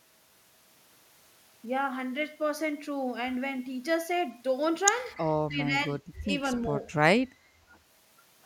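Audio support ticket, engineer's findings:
Speech level dips 5.47–6.0 s, in pieces totalling around 0.4 s, deepest about 15 dB down. Likely speech suppressed in double talk: echo canceller, unable to separate near talker from loudspeaker echo, attenuating both.

Second, sharper dip 6.21–6.3 s, about 25 dB down. Likely same mechanism.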